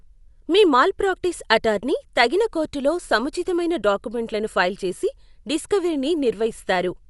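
Throughout the speech, nothing reaches above 11.4 kHz, and plainly audible dull, rough, fluttering noise surrounds tones, likely from Dolby Digital compression at a low bitrate near 64 kbps.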